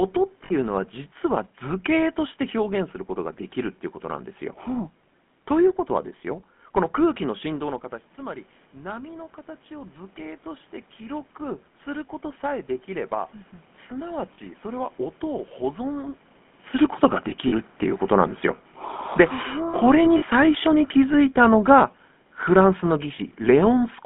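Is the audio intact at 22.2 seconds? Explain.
No. Automatic gain falling runs from 19.84 to 23.96 s. The gain control judged the input too loud, or its background noise too strong, and is pulling its level down gradually, by about 6 dB across that span, so at 22.2 s the speech is sinking, and the room noise behind it drops along with it.

The GSM full-rate codec is also present throughout, including this moment. It rebuilds speech from a vocal-tract model driven by sparse, regularly spaced pulses, which fits a 13 kbit/s full-rate coder. The result is a plainly buzzy, gravelly roughness confined to a 150 Hz to 3.4 kHz band.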